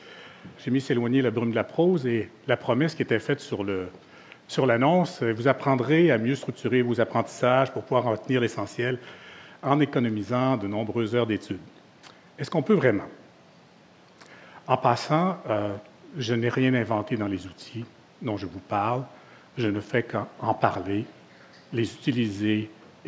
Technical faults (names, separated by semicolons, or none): none